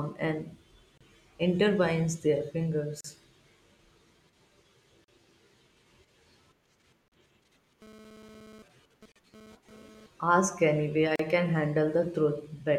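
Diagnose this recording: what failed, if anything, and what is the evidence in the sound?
Two faults, at two different stages. The first is at the codec stage: gaps at the joins of encoded pieces. Short silences open in continuous speech at 0.98, 3.01, 5.04, 7.08, 9.12 and 11.16 s. They repeat every 2.0 s. The first lasts about 31 ms and the rest about 38 ms. The edges are smeared. The speech resumes where it stopped. The pieces were encoded separately and joined untrimmed. Each join keeps the encoder's start delay and last-frame padding as silence.

The second fault is in the analogue wiring: GSM phone buzz, from 7.82 to 10.06 s. It is a hard, raspy buzz at 217 Hz, rich in harmonics. It has no relation to the speech. It sits about 24 dB below the speech. It comes and goes rather than holding steady, which fits a phone doing a data transfer. A nearby 2G handset transmits in bursts 217 times a second. 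The audio circuitry rectifies those radio pulses into audible buzz.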